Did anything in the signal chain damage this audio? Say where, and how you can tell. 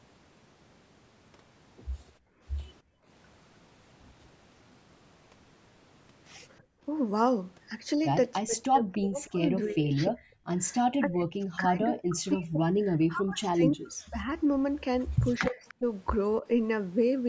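Yes. Background gated by the echo canceller at 2.18–3.06 s and 6.6–6.84 s: room sound drops by about 27 dB while the call-processing stage clamps the microphone during far-end playback.

Speech suppressed in double talk from 8.41 to 14.31 s and 15.49 to 16.46 s: the voice dips by up to around 40 dB, likely the canceller attenuating both talkers during overlap.

Echo leak at 8.63–9.71 s and 15.68–15.74 s: a faint copy trails by 299 ms at about 25 dB down, likely residual loudspeaker pickup the canceller missed.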